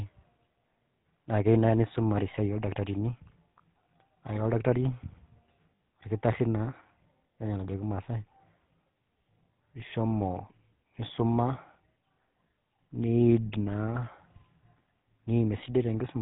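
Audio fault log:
throughout: GSM full-rate codec. The whole clip carries a buzzy, gravelly roughness on the speech, plainly audible, and the sound stops at 4 kHz. The coder models the vocal tract as a filter and excites it with a regular pulse train that keeps only one sample in three of the residual. That coarse excitation produces the grit. The bandwidth and texture fit the 13 kbps full-rate codec.
5.76–5.79 s and 13.48–13.51 s: lost GSM frames. At each point the sound briefly freezes into a rough, metallic ring instead of continuing. The first ends just before "orkitari naa", and the second is shorter. The decoder fills missing frames by reusing the parameters of the last good frame, so the held spectrum rings. The gaps of about 40 ms and 20 ms point to two frames and one frame lost.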